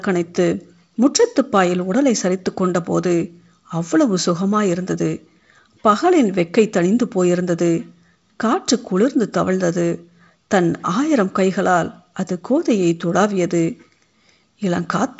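Nothing is technically wrong with the clip: it is speech carried over G.722 wideband telephone coding, with content reaching up to about 7.7 kHz.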